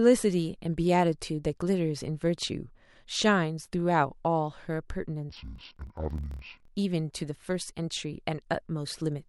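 Interleaved audio read as planar affects this speech clip from 5.30 to 6.69 s. Within each 26.1 ms block, the alternating left and right samples are split so that the first half plays as left and the second as right. Each channel therefore runs at half speed across the block, and the voice drops an octave. It sounds doubled and choppy, with blocks repeating at 38.3 Hz, while the overall pace stays correct.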